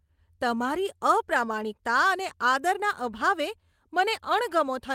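Nothing stood out on listening to this speech recording.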